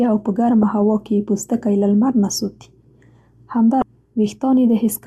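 At 0.63 s and again from 3.79 to 3.82 s, this speech is hit by damaged data in a compressed stream. Corrupted bytes made the decoder misread those frames and lose sync until it locked onto a valid header again, producing a short chirp, squawk, click or brief hole each time, the second much longer. On a spectrogram each shows as a thin vertical break cutting across the speech harmonics; on the waveform, an abrupt discontinuity.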